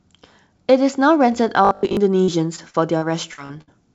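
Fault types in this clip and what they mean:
Robotic sound from repeated short buffers: From 1.65 to 1.97 s the speech turns into a rigid metallic buzz at 50 Hz. Most of the stretch is repeats, likely from a 20 ms buffer looping.
Repeated packet loss (robotic sound): Between 2.24 and 3.70 s, seven gaps are patched by continuing the last sound. Speech turns choppy and robotic, with the longest gap about 59 ms.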